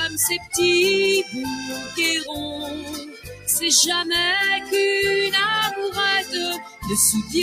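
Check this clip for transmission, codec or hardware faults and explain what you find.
The clip has one processing fault: a speech-oriented noise suppressor left running on audio that is not speech.

Noise suppressor applied to music or sounds: throughout, the level pumps and thins by roughly 10 dB as a speech-tuned suppressor treats sustained content as noise.

Sound cut by the noise suppressor: at 0.36–0.54 s, 1.57–1.99 s, 2.21–3.48 s and 6.56–6.85 s, sustained sound sinks by about 16, 8, 13 and 12 dB respectively, because the suppressor misjudged it as noise.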